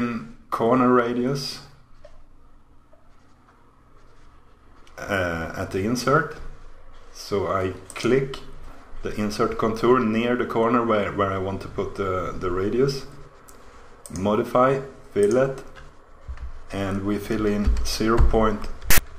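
Near the end, from 18.91 to 18.99 s, file tags are played as audio: a block of text tags with zero padding is decoded as samples, giving a hard-edged burst of rasping, one-sided static followed by silence where the padding sits.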